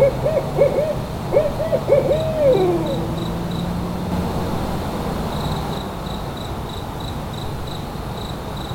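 From 4.12 s to 5.78 s there is a doubled audio track. A second full-band copy of the sound trails by about a tenth of a second, about as loud as the original. It has no decay or room colour. It starts and stops abruptly. A slower second capture path is the likely cause.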